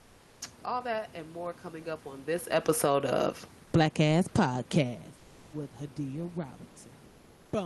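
From 0.00 to 0.37 s the clip opens on comfort noise in place of the background. The real room noise, sitting about 32 dB below the loudest speech, is replaced by a steady, featureless hiss about 3 dB quieter, most likely generated by Opus discontinuous transmission while the sender was holding back packets during the pause. The same happens again from 7.09 to 7.45 s, this time about 2 dB down.

The automatic gain control then pumps twice in the middle of the clip, around the talker's changes in distance. Just after "coming up on this", the automatic gain falls by about 4 dB from 2.54 to 2.99 s, then rises by about 3 dB from 2.90 to 3.37 s, so speech and background dip and swell together. A deeper cycle follows: the gain falls about 10 dB from 3.59 to 3.99 s, then rises about 6 dB from 3.90 to 4.85 s as the input level drops by about 20 dB. The level sags audibly and then climbs back over nearly a second, with the Opus path's top end stopping at 12 kHz throughout.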